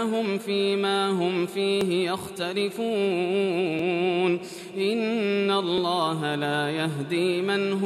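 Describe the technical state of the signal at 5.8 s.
At 5.78 s there is a tiny skip where the waveform jumps. This is an overlap between stream segments: two segments' time stamps overlapped, and trimming the duplicate span removed about 11 ms of sound that was never actually doubled.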